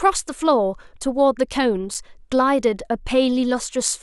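Speech, with a block of digital silence at 1.94 s: a 5.3 ms hole, fitting a 256-sample buffer left unfilled, cut abruptly without fades, so it ticks rather than sounding like a softened dropout.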